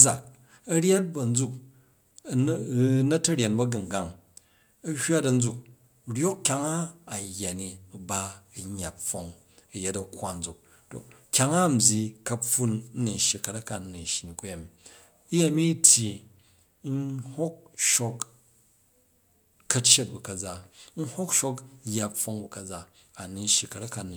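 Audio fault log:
No faults heard in this speech recording.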